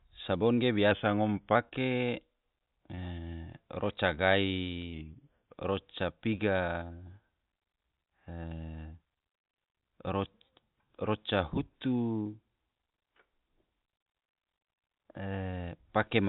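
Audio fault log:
0.54–0.59, 1.69–1.73, 2.95–2.99, 6.87–6.91, 12.23–12.27 and 15.51–15.55 s: short concealed packet loss. Roughly 20 ms of audio never arrived (40 ms at 0.54 s), and the receiver filled each gap by extending the preceding sound. This produces a brief smear or wobble rather than the hard silence or click of an unconcealed dropout.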